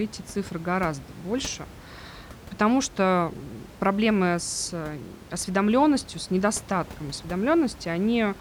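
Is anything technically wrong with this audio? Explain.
No, nothing in this speech recording points to a technical fault. The room noise of the recording space sits in the background, about 19 dB below the speech.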